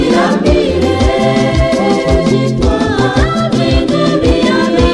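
No technical faults are audible.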